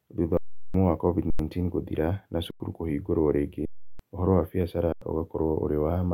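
Underrun with held sample: the output buffer repeatedly ran dry and the converter froze on its last value, so the speech flattens into silence at 0.37–0.74 s, 1.30–1.39 s, 2.51–2.60 s, 3.65–3.99 s and 4.92–5.02 s. Each flat stretch lasts 93 ms or about 340–370 ms; the 93 ms and 370 ms stretches fit buffers of 4096 and 16384 samples. The speech resumes further on, with roughly 100 to 400 ms of audio skipped each time.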